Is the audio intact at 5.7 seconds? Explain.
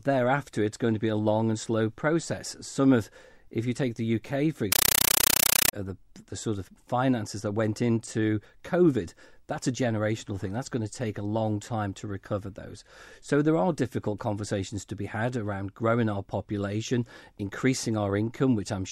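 No, 5.7 seconds falls right at the tail of a compressed stream played as audio, running from about 4.72 to 5.73 s, just before "uh the the sort". The receiving end treated an encoded Dolby Digital bitstream as plain PCM instead of decoding it, so the speech is replaced by loud, chattering static: 8 ms noise bursts repeating 31.25 times a second with silence between. That pattern fits a 384 kbps AC-3 stream.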